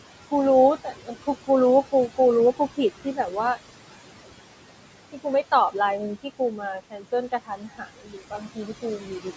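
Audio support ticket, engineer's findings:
Noise suppressor artifacts throughout: steady background pulled down about 17 dB between phrases, residue rising under speech. Unlike plain room noise, level pumps frame by frame with the sound.

Speech cut by the noise suppressor at 0.84–1.11 s, 3.04–3.34 s, 6.8–7.13 s and 7.32–9.26 s: quiet speech parts dropped up to about 16 dB, swallowed rather than clipped or muted outright; longest stretch about a second affected.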